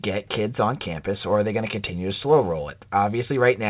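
Nothing goes wrong anywhere in this speech clip; it just carries the narrow, phone-like sound of the call path, with nothing above about 4 kHz, which fits a G.711 A-law link.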